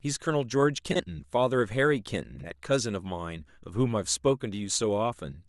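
At 0.91 to 1.02 s and again at 2.35 to 2.47 s, frames out of order: two adjacent runs of frames, each fitting about four frames, arrive swapped, so a brief stretch plays halves reversed, a garbled flutter. Unlike a dropout, no time goes missing.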